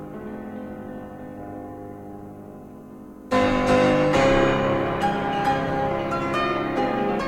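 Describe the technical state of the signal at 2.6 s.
At 2.6 s the music plays through intact, with no dropout, click, distortion or other technical fault at that point.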